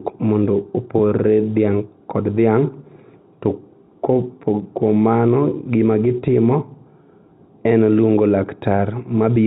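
Nothing's amiss with this speech recording, which comes through G.711 A-law telephone coding at 64 kbps with no fault to point to anywhere in it.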